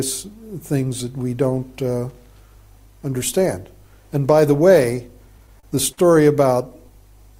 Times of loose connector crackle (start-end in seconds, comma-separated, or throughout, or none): 2.10-2.30